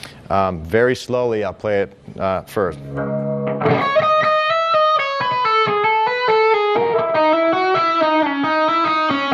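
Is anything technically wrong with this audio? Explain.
Yes. Throughout, the audio shows MP2 compression damage: dull, gurgling and granular, with upper bands flickering. This likely comes from Layer II sub-bands starved of bits, consistent with roughly 80 kbps.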